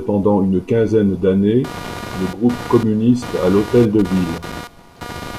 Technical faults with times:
1.64-5.39 computer activity noise

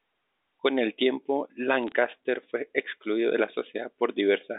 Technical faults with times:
1.83-1.92 bit errors on a digital phone line

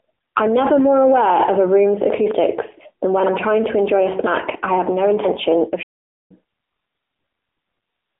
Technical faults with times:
0.00-8.20 AMR narrowband mobile codec
5.82-6.31 playback stall

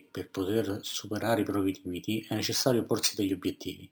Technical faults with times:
0.00-3.91 imaging from sample-and-hold upsampling

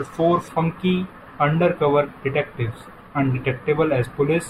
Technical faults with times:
0.48-4.49 channel delay (comb filtering)

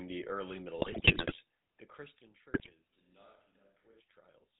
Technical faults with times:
0.00-4.60 GSM full-rate codec
0.78-1.39 GSM bit errors
2.54-2.75 GSM bit errors

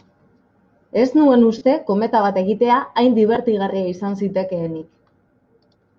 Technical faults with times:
1.58-1.61 lost LE Audio frames
3.35-3.37 lost LE Audio frames
5.29 lost LE Audio frames

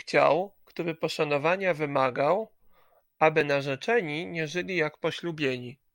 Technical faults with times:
3.41 dropped buffer (overrun)

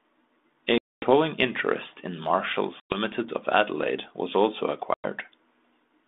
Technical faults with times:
0.78-1.10 packet loss on an ADPCM call
2.80-2.97 packet loss on an ADPCM call
4.94-5.06 packet loss on an ADPCM call

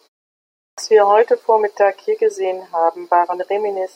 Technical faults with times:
0.53-0.78 clipped start after a pause

